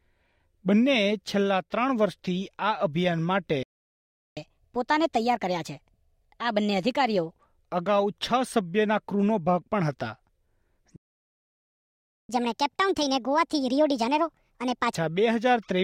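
At 3.63 s the sound cuts out mid-flow and stays silent for about 0.74 s, until 4.37 s. This is a playback stall, likely the player running short of data or its thread being blocked. From 4.37 s to 7.31 s everything runs fast and sharp, at 1.25 times normal speed and raised by roughly four semitones, before settling. That is catch-up at higher speed: the player resamples its backlog to recover the lost time.

A longer playback stall follows at 10.96 s. The output drops to silence for about 1.33 s, resuming at 12.29 s. The catch-up after it is more aggressive. From 12.29 s to 14.95 s the sound plays at 1.5 times speed, pitched up by around seven semitones, so the rise is much more obvious than the first. It then returns to normal pace once the larger gap has been made up.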